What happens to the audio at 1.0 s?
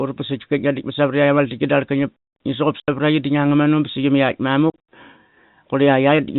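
Nothing goes wrong at 1.0 s: the speech carries on intact through the G.711 telephone coding, with only the narrow band below 4 kHz that this path always imposes.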